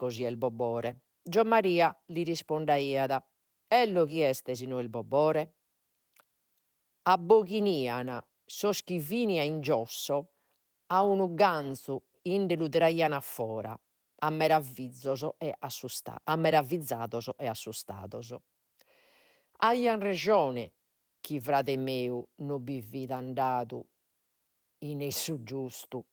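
No faults are audible anywhere in this speech recording.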